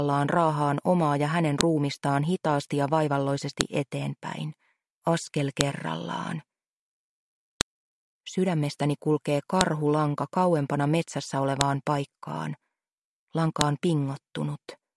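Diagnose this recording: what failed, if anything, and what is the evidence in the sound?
The failure is at the storage or file-joining stage. It is a file header played as audio. Sharp, loud clicks land at 1.61, 3.61, 5.61, 7.61, 9.61, 11.61 and 13.61 s. They are evenly spaced, 2 s apart. Each snap is brief and ignores whatever the sound is doing. That points to 2 s pieces joined end to end with their WAV headers left in. The header bytes are decoded as samples, giving a burst of garbage values at every seam.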